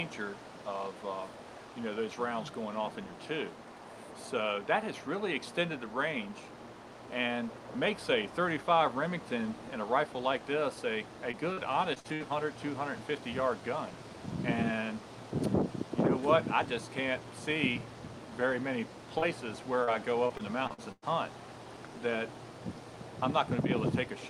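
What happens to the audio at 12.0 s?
Two short stretches of short concealed packet loss arrived too late for the decoder, at 11.95 to 11.98 s and 12.00 to 12.06 s. The receiver extended the preceding sound to fill each gap, then blended back, leaving a brief smear or wobble.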